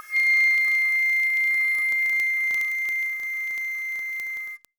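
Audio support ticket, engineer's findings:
Word clock ticks in the music, from 0.13 s to the end: sharp ticks of uneven strength, roughly every 30 ms, around 150 in all. Probable component is a digital input receiver free-running on its own clock, not locked to the source. The clocks drift apart by something like 700 ppm, so one sample is dropped or repeated at each slip. Unlike buffer underrun clicks, there are no audible gaps, and the ticks keep a fixed, fast rhythm.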